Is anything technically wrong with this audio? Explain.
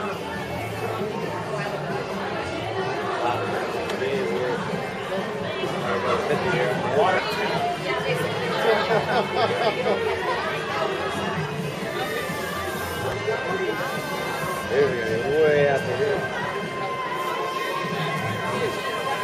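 Yes, there's damaged data in the compressed stream, heard as four brief blips: at 4.69 to 4.71 s, 7.18 s, 13.12 s and 16.14 s. Corrupted bytes throw the decoder off, and it loses sync until it finds the next good frame.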